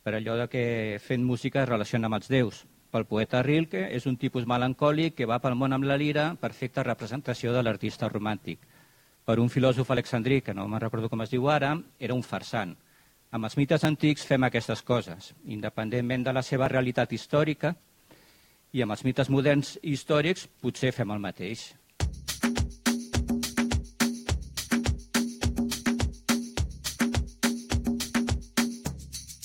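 At 9.97, 13.85 and 16.66 s, the audio skips ahead about 10 ms: waveform steps, thin vertical spectrogram lines. Likely a dropped buffer (overrun).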